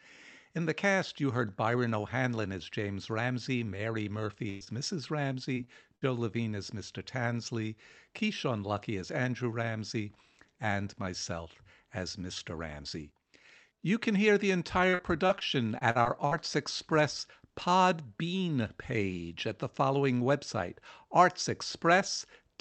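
At 4.49 to 4.63 s, a burst of packet loss removes about 120 ms. The decoder holds the last sound and fades it out, seen as smeared, stretched energy with decaying amplitude.

At 4.65 to 4.69 s, a short concealed packet loss of about 20 ms leaves a brief wobble, a small blurred patch between clean frames.

Repeated packet loss (robotic sound) occurs at 5.45 to 6.04 s, at 14.90 to 15.43 s after "can hear the", and at 15.79 to 16.33 s. Each span has four gaps, the longest 56, 39 and 42 ms, with about a fifth of the stretch patched. It sounds choppy, and the spectrogram shows repeated frozen, smeared slices. Across the clip, the call path's band-limit cuts the spectrum off at 8 kHz.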